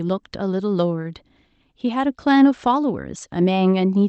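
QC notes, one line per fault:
The speech comes through an Opus call path with the audio bandwidth ending at 8 kHz, and the signal holds steady with no fault present anywhere in the clip.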